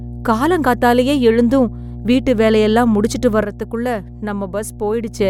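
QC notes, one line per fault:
throughout: mains hum, a steady low tone at 60 Hz sitting roughly 15 dB below the speech. Power-line energy is leaking into the signal path, most plausibly through a ground loop or a nearby transformer, so the tone persists unchanged under and between phrases.
3.43–5.19 s: one channel drops out, heard as an abrupt fall of about 6 dB in the speech level that holds until 5.19 s, then recovers. The likely cause is one stereo channel going silent, so the mono sum carries only half the shared signal.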